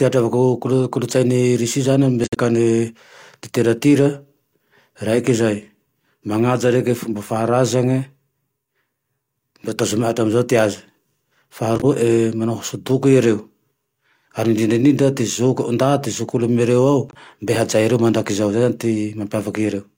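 Speech with three brief damaged spots, at 2.24 to 2.37 s just after "zane amy", 11.76 to 11.85 s, and 17.09 to 17.17 s. Each is a corrupt frame concealed: the AAC decoder caught damaged frames and covered them by muting or repeating a scrambled spectrum.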